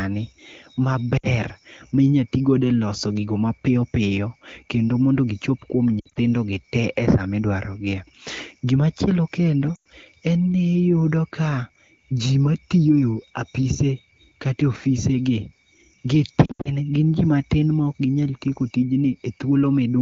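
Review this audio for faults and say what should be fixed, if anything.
Lost AMR speech frames at 1.17–1.27 s, 6.00–6.19 s (after "kendo mondo gichop kuom"), 9.75–9.88 s and 16.45–16.71 s. Frames that failed their checksum were concealed by repeating the last pitch and vocal tract settings at falling gain. The sound drops to near silence within two frames. A spectrogram shows harmonics frozen flat before thinning, and the waveform envelope sags. Stronger radio coverage or error protection would prevent this.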